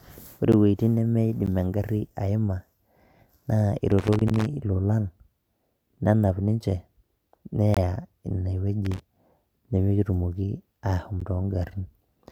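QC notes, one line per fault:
0.52, 1.46, 4.28, 7.74 to 7.77 and 11.20 s: block of digital silence. The speech drops to silence and returns with no fade. Four gaps last about 12 ms and are heard as ticks. The one at 7.74 s is twice as long, about 23 ms, and sounds like a short hole. The equal lengths point to whole buffers left unfilled in time, which fits a 512-sample buffer, doubled at 7.74 s.
3.91 to 4.46 s and 8.85 to 9.00 s: loose connector crackle. An irregular burst of scratching and crackle sits over the speech. The first burst lasts about half a second and also contains the dropout at 4.28 s. The second is short, about 0.15 s. A worn or dirty contact is making and breaking rapidly. This chops the signal into fragments, and any DC on the line adds pops.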